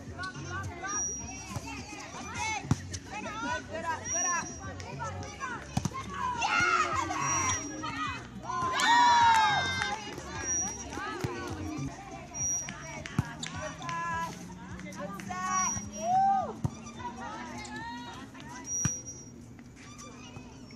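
Nothing in this audio stands out as a technical fault, so there's nothing here to flag.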